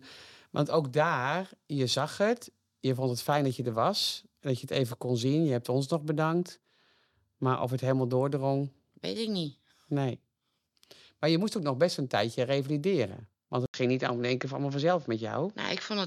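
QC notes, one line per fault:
13.66–16.06 s, input switched to a poorer device: after a gap of about 80 ms at 13.66 s, the speech turns duller and boxier, with nothing above 7 kHz, and a faint new background noise sits well beneath it. Loudness stays about the same, so the change is heard in tone rather than level. The likely cause is the recording moving to a different, narrower-band microphone or headset input, which brings its own coloration and noise floor through to the end of the clip.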